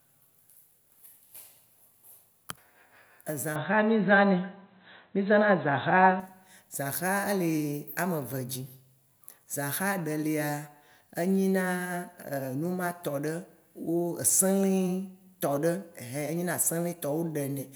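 Speech, with the recording input likely switched to a poorer device from 3.56 s to 6.20 s, probably another microphone or a headset's call profile. That path passes a narrower band, so nothing above 4 kHz survives and the voice turns dull and boxy without any gap at the switch. It also carries its own tone, a modest level shift and a faint new noise floor well below the signal, before the fuller sound returns at 6.20 s.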